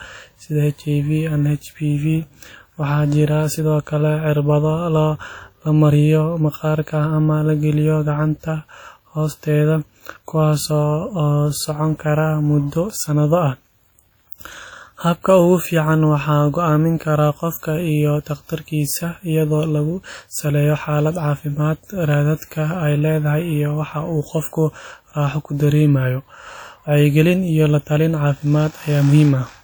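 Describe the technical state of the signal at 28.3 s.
At 28.3 s the speech carries WMA compression damage that runs through the whole clip and is plainly audible here: a ringing, washy quality with hiss that swells and fades with the speech. This is likely a transform codec whose long blocks spread quantisation noise over tens of milliseconds, at a rate that fits roughly 48 kbps. A spectrogram shows smears around transients, patchy holes where weak components were zeroed, and an empty band above 20.1 kHz.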